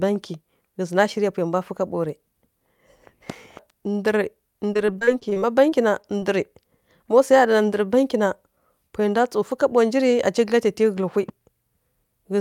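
From 4.73 to 6.24 s, repeated packet loss (robotic sound) makes the speech choppy. A rapid run of short holes, the longest 24 ms, is patched by repeating the preceding sound. The spectrogram shows smeared, stuttering bands broken by thin gaps, and the waveform shows repeated segments.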